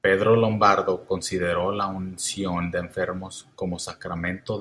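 Speech throughout, with no dropouts, clipping, glitches or other technical faults to be heard anywhere in the signal.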